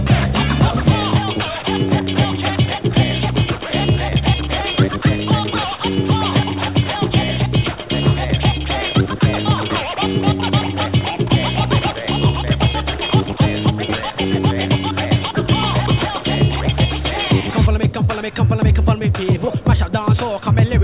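No technical faults can be heard anywhere here.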